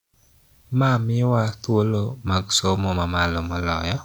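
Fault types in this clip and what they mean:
There are no fault types in this clip.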